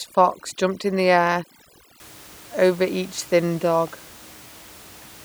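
A speech recording in which a noise reduction stage is set far too aggressively over the first 2 seconds, from 0.0 to 2.0 s: overdone noise removal. The processor pulls individual frequency bands right down whenever they sit close to its noise estimate, taking quiet parts of the voice with them. The background drops and breaks up into twinkling specks, unlike the later room noise about 24 dB below the speech.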